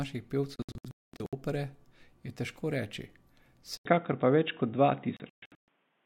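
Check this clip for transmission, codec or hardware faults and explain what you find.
Three faults stand out: two bursts of digital broadcast dropout and a change in the sound that is most likely an input switched to a poorer device.

The digital broadcast dropout first appears between 0.56 and 1.33 s. The audio mutes in several short holes, totalling about 0.51 s across roughly 0.77 s, with the longest gap 0.22 s. It happens again from 5.17 to 5.68 s, where about 0.35 s goes missing across 0.51 s and the longest hole is 0.13 s. When frames are corrupted or the signal is lost, the receiver mutes until valid frames arrive, so that stretch of the programme is gone. The hole lengths fit frames of about 32 ms. This differs from a network glitch with concealment: nothing is smeared or repeated, there is only clean silence, and the speech resumes further along.

At 3.77 s there is a silence of 80 ms, and from then to the end the sound is narrower and duller, with nothing above 3.8 kHz. 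The level changes by a few dB, and a faint new noise floor appears well below the speech. The likely cause is that the system switched to a lower-grade microphone or a headset's call profile, which has a smaller bandwidth and its own tone and noise. A gradual filter or a codec bitrate drop would not produce this. Here the change is an abrupt, lasting step that begins with a brief gap, and the second dropout falls inside this stretch.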